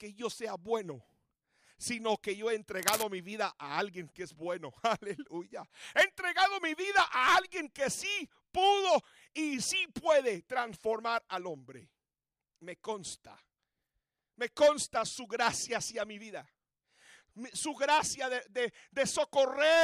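From 2.79 to 3.03 s, a burst of cable scratch noise, dense and irregular crackling roughly as loud as the sound itself, likely from a worn cable or connector being moved. Unlike a single click, it is a quarter-second cluster of uneven scratching.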